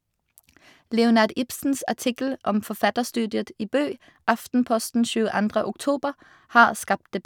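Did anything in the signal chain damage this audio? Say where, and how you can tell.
No, nothing along the signal chain has left audible damage on this speech recording. Listening closely across the whole clip turns up no point where any stage has marked the sound.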